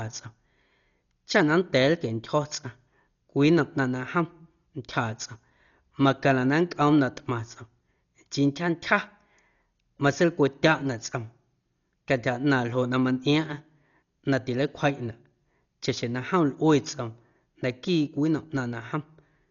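Right through the speech, nothing comes through above 6.9 kHz and tones carry a rough, fluttery noise, heavy damage that's likely Dolby Digital compression starved down to around 40 kbps.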